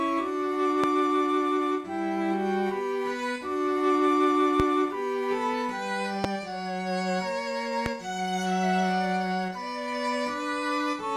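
Loud pops at 0.84, 4.60, 6.24 and 7.86 s: each is a single sharp pop, some 15 dB above the surrounding sound, lasting about 26 ms while the audio continues underneath. A brief voltage pulse is the likely cause, perhaps from a switch, static or a driver glitch.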